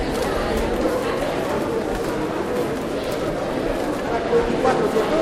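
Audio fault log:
1.26–5.22 s: periodic clock jitter, converter clock modulated at around 700 Hz, adding sidebands at that spacing around each component, giving a rough, metallic edge strongest on high content.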